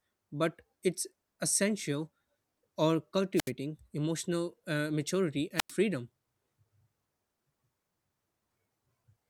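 At 3.36 to 3.51 s, just before "emotional uh maturity", and again at 5.56 to 5.72 s, right after it, a wireless microphone squelch dropout occurs: the radio link fades, hiss swells, then the receiver mutes for 71 ms and 95 ms. The spectrogram shows broadband noise flaring into blank gaps, and the waveform flattens to near silence.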